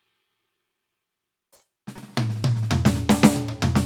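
At 0.69 s the music hits a repeated buffer. Fresh audio arrived late, so the device replayed its last 5 ms block once, which fits a 256-sample buffer. About 5 ms of music is lost. It sounds like a tiny click.

From 1.55 to 1.75 s comes a short stall from a late packet. The jitter buffer ran dry. The receiver held the last sound for about 40 ms, then resumed where it stopped. Nothing is missing. One moment just lingers, with a faint buzz.

At 1.96 s another repeated buffer strikes. The same small block plays four times in a row. Roughly 15 ms of music drops out. The hard joins give a brief buzzy stutter.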